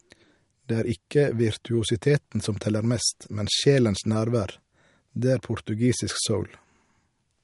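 Throughout the clip, a starved MP3 encoder is the likely source of the MP3 compression damage: bits are too scarce, which fits a low bitrate near 48 kbps. Nothing survives above 11.2 kHz, so the speech loses its top, while weak frequency lines flicker on and off, leaving a plainly audible watery swirl.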